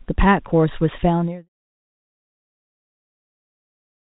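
Nothing in this speech clip is technically wrong. It carries the narrow telephone band of G.711 A-law coding at 64 kbps, with nothing above 4 kHz, and the level fades smoothly out from around 1 s to 1.49 s with no click or hard edge.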